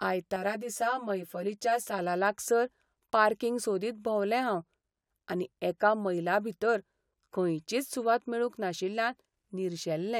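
From 0.36 to 1.99 s the speech turns hollow and phasey from channel delay (comb filtering). One channel arrives roughly 10 ms late, and summing to mono cancels shared content at evenly spaced frequencies, starting near 50 Hz and repeating up the spectrum.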